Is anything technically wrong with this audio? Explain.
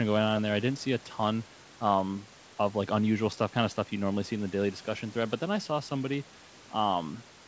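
No, nothing is technically wrong with this audio.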